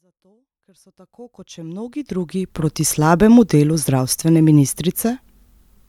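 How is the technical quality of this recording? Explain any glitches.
No glitches to report: the speech comes up on a smooth fade-in from the start, reaching full level at 2.72 s with no click or hard edge, and nothing else in the recording calls for comment.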